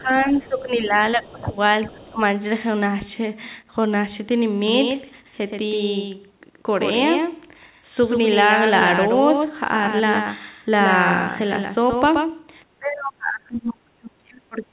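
From 0.00 to 0.95 s, the echo canceller likely could not tell the near talker from loudspeaker echo while both sides spoke, and it turned everything down. This is speech suppressed in double talk: the voice sinks by around 10 dB for about a second. It comes back briefly, then drops again from 1.13 to 1.55 s, this time by roughly 20 dB, for close to half a second, and the speech audibly recedes.

At 1.87 to 2.02 s, the other side's voice leaks through. It is likely loudspeaker playback that the echo canceller failed to fully remove from the microphone. It shows up as a faint scrap roughly 20 dB under the main speech. Overlapping it, from 1.88 to 2.21 s, a third double-talk suppression pulls the talker down by around 15 dB for about a third of a second.

From 4.68 to 12.62 s there is a doubled audio track, likely a second capture path or an edit carrying a copy out of step. A full-band duplicate trails the speech by roughly 150 ms at around 5 dB below it. 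It gives a hard, slapback doubling with no room decay, and it cuts in and out abruptly at those two points.

From 12.79 s to the end, double-talk suppression returns and is at its deepest, about 35 dB. Throughout the clip, the call path's G.711 mu-law coding leaves nothing above 4 kHz, which fits a 64 kbps narrowband link.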